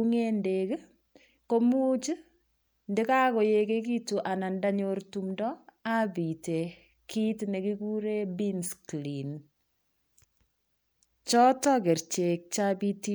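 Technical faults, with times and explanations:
No technical faults detected in this speech recording.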